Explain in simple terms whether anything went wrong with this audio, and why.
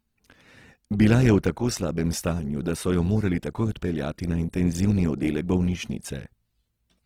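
Something did go wrong. From start to finish the speech sounds rough and grainy, with a gritty, hissy texture where it should be clean. That's the typical sound of Opus compression, likely squeezed too hard, filling in missing detail with noise instead of real sound.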